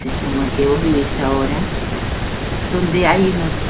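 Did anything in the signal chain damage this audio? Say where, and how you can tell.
No, the speech carries only what a normal call path leaves on it: the microphone processing's high-pass trims the deepest bass, and the band stops at 4 kHz with the usual coding noise of a narrowband call codec, consistent with G.711 mu-law at 64 kbps, so no stage of the chain has damaged it.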